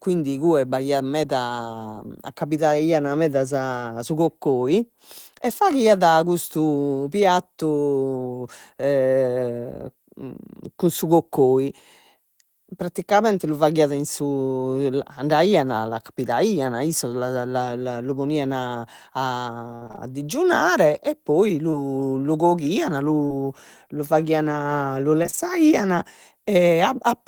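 Repeated packet loss (robotic sound) first appears from 19.75 to 19.99 s. Five gaps fall in under a quarter second. About 140 ms of audio is missing, the longest gap 58 ms. Each hole is patched by stretching the last sound, so over half the span is synthetic. It comes out choppy.

Short concealed packet loss follows at 21.71 to 21.75 s, between "e poi" and "lu coghian". About 20 ms never arrived. The receiver filled it by continuing the previous sound, then blended back. It is heard as a brief smear.

A second short concealed packet loss sits at 23.27 to 23.33 s, just after "lu coghian". Here 40 ms was lost and filled the same way. The patch runs a few milliseconds long, so the timing slips slightly. It sounds like a small wobble.

Repeated packet loss returns from 25.23 to 25.39 s, right after "faghian lu". Four gaps remove about 80 ms, the longest 30 ms. About half the stretch is concealed. 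The sound turns choppy and broken again.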